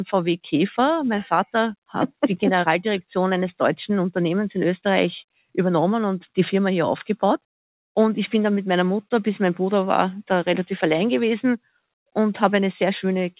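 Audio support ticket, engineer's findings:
No defects found; the audio is band-limited to 4 kHz, consistent with a narrowband G.711-style call codec, and the low end is trimmed by the usual call microphone high-pass.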